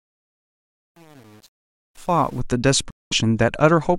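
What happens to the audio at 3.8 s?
At 3.8 s the speech carries on intact, with no dropout, click or other fault at that moment.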